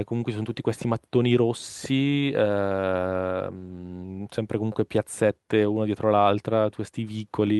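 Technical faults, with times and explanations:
No technical faults can be heard in this clip.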